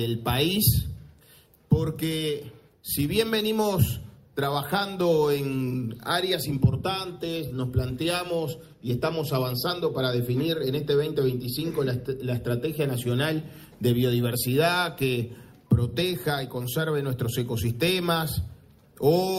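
Nothing goes wrong anywhere in the audio: there are no technical faults to point to at any moment.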